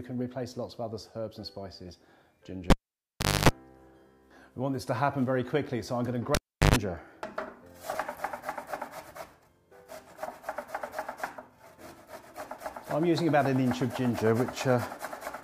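A live cable was pulled and plugged in twice during the audio, at 2.70 to 3.49 s and again at 6.35 to 6.76 s. Each time, a pop marks the break and the signal drops to near silence, for about 0.74 s and then 0.37 s. As the plug goes back in, the tip touches first and picks up a 50 Hz mains buzz lasting 0.26 s and 0.12 s respectively, before a second pop brings the sound back.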